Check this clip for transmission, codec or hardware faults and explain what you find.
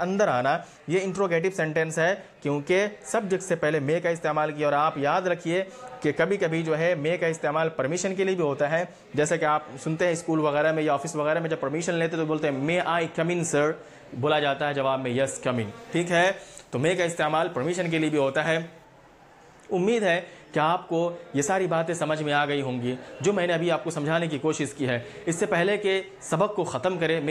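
One fault stands out. From 15.56 to 18.84 s there is pre-emphasis left on. The treble boost matches the CD 50/15 µs curve, but the complementary cut never happened. Highs sit about 8 dB hot at 10 kHz relative to 1 kHz. The sound turns thin, bright and sibilant.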